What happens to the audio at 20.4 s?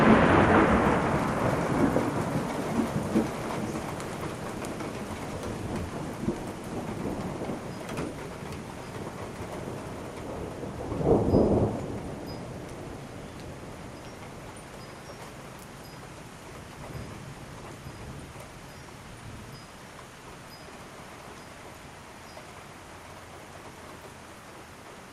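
At around 20.40 to 20.48 s you get chunks out of order. One short block of about 43 ms shows up a chunk late, so it plays after the block that should have followed it. Nothing goes missing, but the sequence is scrambled, which leaves three hard joins in that tiny window. You hear it as a brief jumbled stutter, where the sound seems to trip over itself for a moment.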